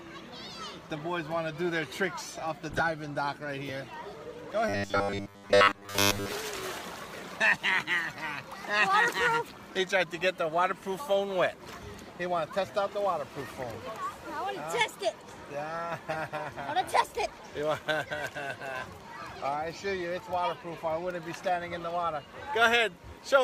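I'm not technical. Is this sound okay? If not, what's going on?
No. There are two kinds of fault.

The first is a corrupt frame decoded. At 2.70 to 2.80 s, 6.81 to 6.84 s, 12.67 to 12.72 s and 16.11 to 16.16 s you hear brief chirps or bursts of noise that don't belong to the sound. Each comes from a small block of compressed data that was damaged, and the player played it anyway, so energy lands at the wrong pitches. The first is the longest and loudest, covering several blocks. The others are shorter and fainter.

The second is robotic sound from repeated short buffers, from 4.69 to 6.31 s. There the sound turns into a stiff, metallic buzz with a fixed low pitch of 100 Hz that still loosely follows the original. The likely cause is that fresh audio arrived too slowly, so the player kept looping the last fragment. A 100 Hz buzz fits a fragment about 10 ms long. Most of that stretch is repeats rather than real audio.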